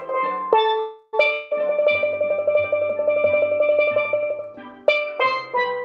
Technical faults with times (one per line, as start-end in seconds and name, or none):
0.79-1.15 call audio freeze
1.33-1.60 long network dropout